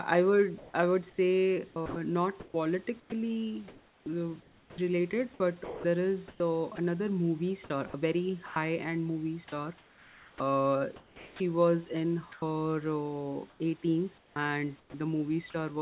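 A speech recording over a narrowband call line, topped out around 4 kHz, and the voice detector is likely tripping it up. There's sound chopped by the voice detector at 0.58–4.78 s (right after "I would"), 5.64–6.78 s, 7.68–8.56 s (just before "end movie"), 9.48–11.4 s (between "end movie" and "was in") and 13.5–14.94 s. Quiet bits get swapped for comfort noise. That's likely the sender's detector gating soft syllables. Then 12.32–12.42 s is sound dropped by the voice detector: a short piece of speech vanishes under a 100 ms patch of comfort noise.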